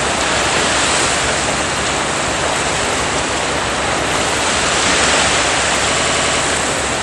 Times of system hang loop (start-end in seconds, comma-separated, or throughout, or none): 5.94-6.41